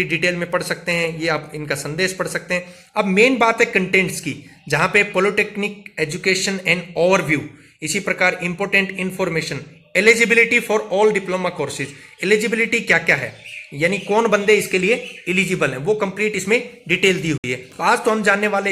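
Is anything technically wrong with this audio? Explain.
Yes. From 17.38 to 17.44 s the sound cuts to silence for about 61 ms, then resumes further along as if it had kept playing. This is likely a Bluetooth dropout: packets arrived too late for the headphones and were discarded, which fits roughly three lost packets.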